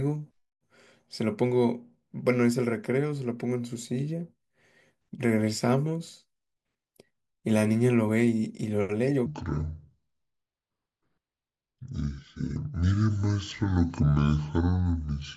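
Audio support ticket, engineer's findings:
Speech drops deep and slow from 9.26 s to end of clip: section at the wrong speed, playing at 0.626x, pitch down roughly seven semitones. Likely cause: segment clocked at wrong rate in editor or player resampling; speed and pitch shift together.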